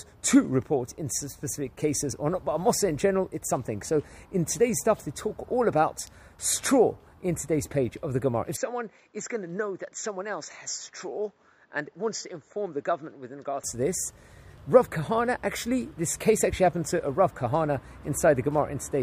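From 8.56 to 13.64 s the audio turns dull and about 10 dB quieter, cut above 7.6 kHz, likely an input switched to a poorer device.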